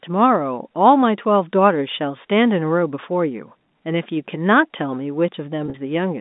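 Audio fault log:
5.66–5.74 s, packet loss with pitch repetition: about 60 ms goes missing across 80 ms, the longest gap 40 ms. Each gap is filled by repeating the last pitch period, so the sound briefly holds with a buzzy sameness instead of dropping to silence or clicking.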